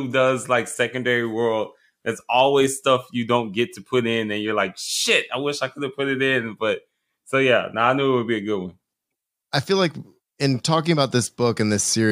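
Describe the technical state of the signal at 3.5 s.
The signal at 3.5 s is intact, with no audible fault at that moment.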